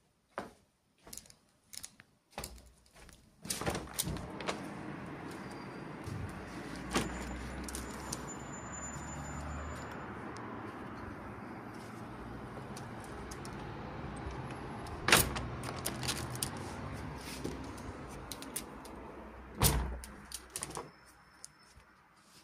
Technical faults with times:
15.03-15.05 lost LE Audio frames

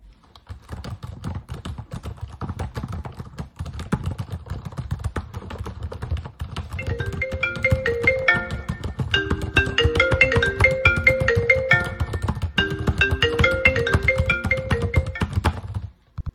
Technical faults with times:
none

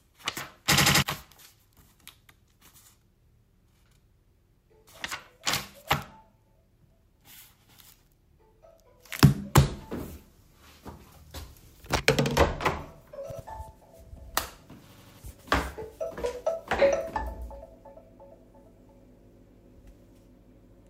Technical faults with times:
0.77-1.02 repeated buffer
13.31-13.40 repeated buffer
14.93-15.19 repeated buffer

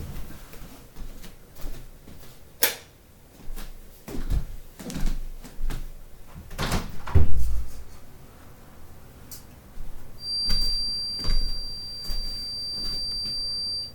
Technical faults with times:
10.16-13.95 feedback whistle

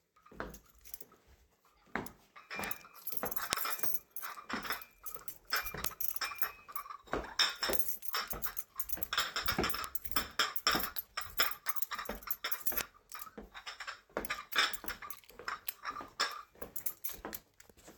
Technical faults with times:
2.64 bit error spike
3.53 bit error spike
5.85 bit error spike
7.73 bit error spike
9.84 bit error spike
12.81 bit error spike

